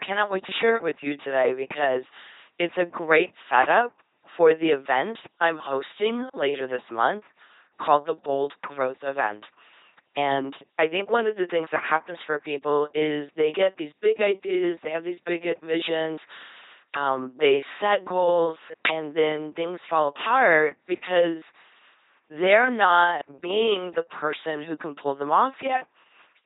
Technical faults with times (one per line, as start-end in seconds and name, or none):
0.00-26.45 LPC-10 vocoder